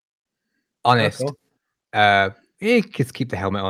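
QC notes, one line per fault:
No faults heard anywhere in this speech.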